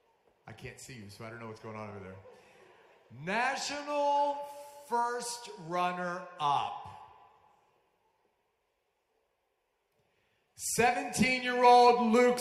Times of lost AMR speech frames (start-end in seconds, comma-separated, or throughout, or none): none